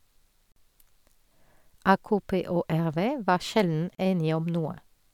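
Two brief holes open in the speech, at 0.52 to 0.56 s (44 ms) and 3.95 to 3.98 s (35 ms), each with smeared edges before the sound resumes where it stopped: gaps at a join of encoded pieces, left by untrimmed encoder delay and last-frame padding.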